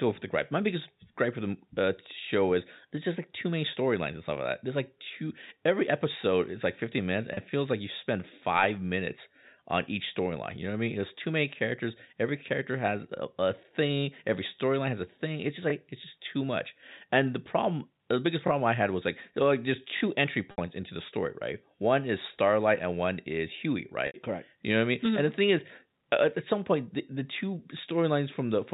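At 7.34 s, between "minutes and" and "it feels like you", a 30 ms gap (which fits three lost 10 ms packets) is filled by packet loss with pitch repetition. The receiver loops the last pitch period, giving a brief held, buzzy tone. On a spectrogram it shows as flat, evenly spaced harmonics with no formant movement. In the waveform, identical cycles repeat and shrink.

Just after "was like like there's", at 19.97 s, comes a repeated buffer. A single 21.33 ms block, which points to a 1024-sample buffer, plays two extra times, running to 20.01 s. It is heard as a quick stutter with a hard join at each repeat. The waveform shows the same short shape copied three times with abrupt edges. A spectrogram shows thin vertical lines at the joins. Roughly no audio is lost; the sound just arrives late.

At 20.51 s, right before "into the story right", and again at 24.07 s, longer 70 ms losses trigger the same pitch repetition. 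The repeated periods fade into silence within the gap, and the speech returns with a short cross-fade. On a spectrogram this looks like harmonics that dim to a blank strip. Throughout, the telephone coding keeps everything below 4 kHz.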